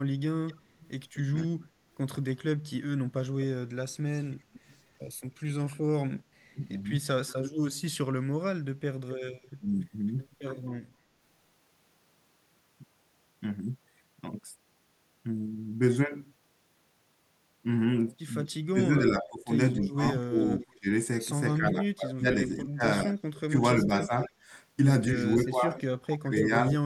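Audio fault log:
0.46–5.43 s, 9.10–10.11 s and 18.46–26.45 s, echo leak: a delayed copy of the speech trails the original by 257 ms, 264 ms and 276 ms. It grows from about 25 dB below the speech to about 20 dB below, then to about 10 dB below in the last stretch. This is likely a far-end loudspeaker whose echo canceller let part of its microphone pickup through and sent it back down the line.
1.48–9.67 s and 18.64–26.73 s, speech suppressed in double talk: the talker dips, thins or drops out in pieces while the returning sound overlaps it. The drops reach about 40 dB in the first span, totalling about a second, and about 35 dB in the second, totalling about four seconds. The echo canceller likely could not tell its own talker from the echo and attenuated both together.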